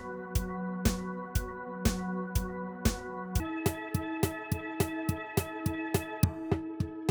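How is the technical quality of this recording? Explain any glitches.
The recording has one clear glitch. Section at the wrong speed, from 3.40 s to the end: playback jumps to 1.75 times normal speed, likely from a clock mismatch, so the sound turns hurried and rises roughly ten semitones.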